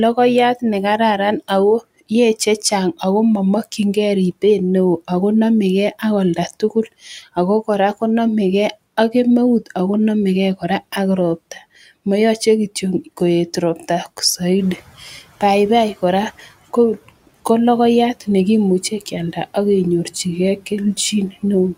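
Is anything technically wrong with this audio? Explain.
Yes, there's one glitch. From 14.58 to 15.15 s, the noise suppressor is catching up: the room noise jumps about 11 dB around 14.5 s, the suppressor's estimate lags, and the noise leaks through before sinking about 12 dB over 570 ms.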